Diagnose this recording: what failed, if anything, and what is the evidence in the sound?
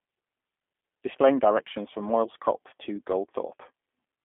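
The fault is at the codec stage: G.729 coding runs through the whole clip. The speech sits in a telephone band of roughly 250 Hz to 3.5 kHz, with nothing above 3.6 kHz, and has a plainly audible rough, buzzy, synthetic edge, which points to an 8 kbit/s G.729A link. A plain narrowband filter would only dull the sound. Here the speech is rebuilt from a vocal tract model, a pitch predictor and a few pulses per frame, and that rebuilding adds the artificial grain.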